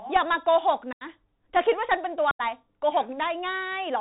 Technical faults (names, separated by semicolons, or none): Bluetooth CVSD headset codec; unconcealed Bluetooth headset packet loss